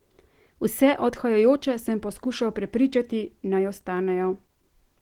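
Speech with plainly audible Opus compression throughout: the voice sounds grainy, rough and hoarse, likely from Opus's hybrid speech mode at a rate fitting roughly 16 kbps. A spectrogram shows fullband content reaching about 20.2 kHz, but the upper bands look smeared and noise-filled.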